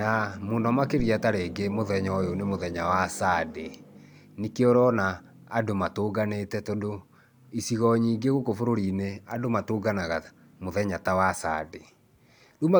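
A phantom power thump arrives at about 1.0 s and is gone by 1.13 s. A supply voltage was switched on or off on a live input, and that sudden DC step passed through the coupling capacitors into the signal path as a single low-frequency pulse. It is heard as a deep, dull thump, peaking at about −20 dBFS and dying away quickly, with a decay of around 31 ms.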